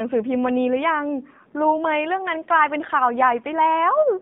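AMR narrowband mobile codec damage runs through the whole clip. The speech is confined to roughly 150 Hz to 3.7 kHz, and the coder's vocal-tract model, rebuilt from a few pulses per frame, leaves it plainly buzzy and synthetic, which fits a low bitrate near 7.4 kbps.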